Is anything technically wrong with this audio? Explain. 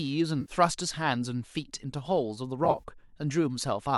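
Yes. There are two patches of AAC frame loss with concealment. From 0.41 to 0.52 s, roughly 70 ms of speech is replaced by a smeared, phasey fill rebuilt from the last good spectrum. From 2.65 to 2.83 s, about 90 ms of losses scattered across 180 ms, the longest run around 30 ms, produce a brief noisy patch. The speech also has a light grain, likely from low-delay AAC coding.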